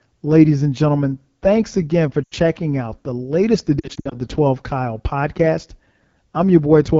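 Across the whole clip, the AMR wideband (HD Voice) codec leaves plainly audible damage. The speech has a rough, raspy texture that fits the low 8.85 kbit/s mode, where the pulse-driven vocal tract model runs short of bits and the 6.4 to 7 kHz band is just shaped noise.

Lost AMR speech frames appear at 2.24 to 2.34 s, between "again for" and "out the latest". The gap is about 80 ms, consistent with four frames, and the decoder repeats stale settings with falling gain, so the sound blurs and dips. From 3.79 to 4.17 s, after "out the latest", about 160 ms of losses scatter across 320 ms in runs up to 60 ms, giving repeated warbles.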